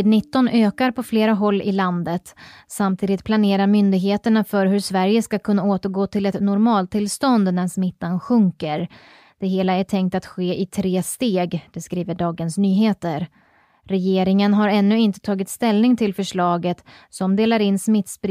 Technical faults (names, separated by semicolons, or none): none